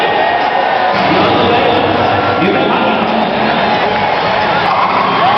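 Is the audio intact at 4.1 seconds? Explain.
No. At 4.1 s the audio has gain pumping, which runs through the whole clip rather than only at that moment. The level swings by roughly 10 dB, leaving everything squashed and close in level. The likely cause is input gain set far too high with a fast limiter clamping down on peaks. Unlike a noise gate, this does not cut the background to silence.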